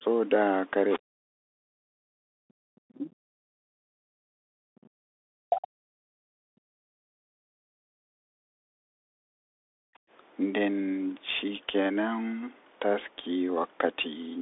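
The speech passes through the Bluetooth CVSD headset codec for the whole clip. Its one-bit, step-adapting coding at 64 kbit/s limits the band to roughly 300 Hz to 3.6 kHz, with nothing above 3.8 kHz, so the sound is narrow and muffled, sibilants turn scratchy, and a granular hiss sits underneath.

From 0.00 to 0.04 s the speech dips by around 15 dB, likely speech suppressed in double talk, where the echo canceller turns the talker down along with the loudspeaker echo it cannot separate.

At 0.90 to 0.99 s a faint second voice appears about 15 dB below the speech. This is likely the other side's voice leaking through, residual loudspeaker echo that the canceller failed to remove from the microphone.

From 1.02 to 3.24 s the speech is held down again, likely by double-talk suppression, sinking by as much as about 40 dB across roughly two seconds.

At 3.52 to 3.57 s the background is gated by the echo canceller, which clamps the microphone hard while the loudspeaker plays. 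The room sound falls by about 40 dB for a brief moment, then returns.

From 3.85 to 9.74 s the speech is again cut by up to about 40 dB over roughly five seconds, likely double-talk suppression once more.

At 10.02 to 10.10 s the echo canceller gates the background again, with a drop of about 40 dB lasting well under a tenth of a second.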